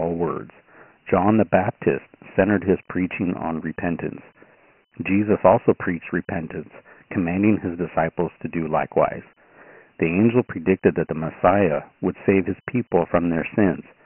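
Speech, and the whole thing runs through Dialogic VOX ADPCM, the phone-system 4-bit format. Nothing survives above 3 kHz, which points to 6,000 samples a second, and the heavy coarse quantisation leaves a gritty hiss riding along with the speech throughout.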